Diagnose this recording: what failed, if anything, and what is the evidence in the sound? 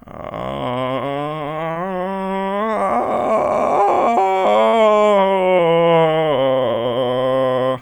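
The network stage failed: packets carrying the music arrived too late or not at all, and the receiver's short concealed packet loss handling papered over the holes. At 1.71 to 1.85 s it synthesised 40 ms in place of 40 ms of missing audio, stretching timing by roughly a hundredth of a second. Shorter repairs follow at 3.85 to 3.88 s (20 ms) and 5.57 to 5.60 s (14 ms standing in for 20 ms), each a brief smear or wobble where the music continues from its last moment.

A burst of packet loss hit at 4.68 to 4.75 s, with consecutive packets' worth of audio lost on the network path. The decoder extended the final received sound for about 45 ms, fading it as the gap continued, so the music turns into a held, decaying continuation rather than moving forward. When real packets resume, playback jumps ahead, and the 40 ms of music in between is simply gone.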